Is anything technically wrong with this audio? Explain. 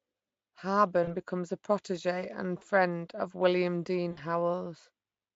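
Yes. VoIP packet loss concealed by the speech codec occurs at 1.04–1.09 s (about 40 ms), 2.57–2.62 s (about 40 ms) and 4.11–4.21 s (about 60 ms). The decoder extrapolates the last pitch and filter with falling gain, so the speech briefly turns into a buzzy tone or coloured noise that fades, staying weak after packets resume. The Speex coding underneath is at most faintly audible, which fits a fairly high quality setting.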